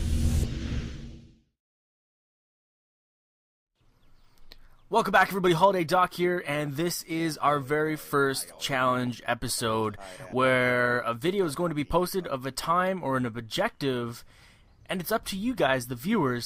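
Right at 0.43 to 0.45 s there's a skip ahead: roughly a second of audio was thrown away while later material was already queued, and playback jumps straight across with no fill, so the two sides butt together almost seamlessly.

From 0.9 s to 5.7 s the jitter buffer speed-up kicks in. The receiver was holding too much audio and kept trimming short pitch-period slices, running about 105% speed at unchanged pitch and shaving around 200 ms, so it feels slightly hurried.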